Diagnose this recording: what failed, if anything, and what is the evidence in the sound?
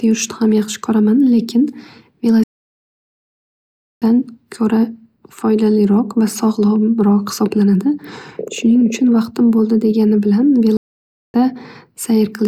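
The speech drops out twice in mid-flow at the playback stage, a playback stall. From 2.43 to 4.02 s the output goes silent for about 1.6 s before resuming on "ko'ra foydaliroq va", and from 10.77 to 11.34 s it is silent for about 0.57 s. On a waveform each gap is a flat line cutting off the signal abruptly, and on a spectrogram a fully blank column. The likely cause is the player running short of data or its thread being blocked until it recovered.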